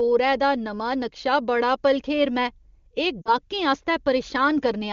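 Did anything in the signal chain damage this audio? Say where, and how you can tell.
Yes, at the network stage: lost AMR speech frames at 3.22–3.35 s, a brief drop toward near silence fitting two dropped 20 ms frames, concealed by repeating the last good parameters at falling gain.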